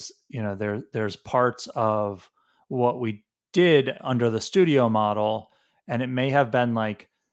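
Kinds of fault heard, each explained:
Nothing's wrong here: the speech has the usual call sound, with nothing above 8 kHz, which is just what the microphone processing and the Opus call path normally leave.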